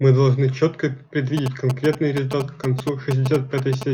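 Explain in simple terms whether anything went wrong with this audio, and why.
A mobile phone on the older 2G network was close to the recording equipment and exchanging short signalling messages with its mast. The circuit picked up those radio bursts and turned them into sound. From 1.37 to 3.83 seconds, the speech has GSM signalling bursts over it: a galloping dit-dit-dit of short buzzes at about 217 Hz, nearly as loud as the voice.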